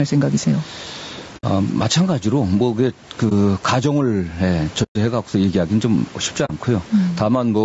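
Throughout the speech, the level behaves as if the input gain were set far too high and a fast limiter or compressor were clamping it back on every loud syllable. This gain pumping swings the level by something like 15 dB, with the faint room noise sitting about 34 dB below the speech. Loud and quiet passages end up pressed close together, and the delivery sounds squashed and breathing.

Running across the whole clip is a second fault: low-delay AAC compression, likely AAC-ELD at a bitrate that points to around 32 kbps. At this low bitrate the voice sounds rough and grainy, with a noisy haze filling the spaces between harmonics and a synthetic quality at the top of a band that ends at 8 kHz.

Four dropouts fit AAC frame loss with muting. The decoder received nothing for these stretches and output silence, with the overlapping windows fading the sound down and back up rather than cutting it sharply. 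The holes fall at 1.37 to 1.44 s (60 ms), 3.29 to 3.32 s (20 ms), 4.83 to 4.96 s (120 ms, the longest gap) and 6.45 to 6.50 s (40 ms). The single lost frame at 3.29 s is a brief dip, and the others are soft-edged gaps.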